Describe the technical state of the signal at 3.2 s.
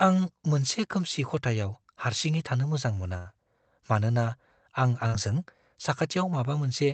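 A burst of packet loss runs from 3.17 to 3.27 s, right after "हारसिङै थानो मोजां मोना". Several packets in a row failed to arrive in time, so the receiver continued the last sound it had and let it fade across roughly 80 ms before the stream resumed further on, skipping about 80 ms of the original speech. The gap is heard as a fading smear where a short stretch of speech is missing, inside the Opus call path's band limit near 8 kHz.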